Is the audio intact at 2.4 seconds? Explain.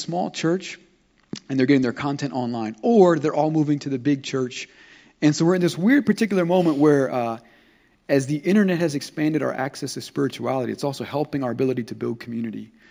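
Yes, the audio is intact at 2.4 seconds, with no fault audible at that moment.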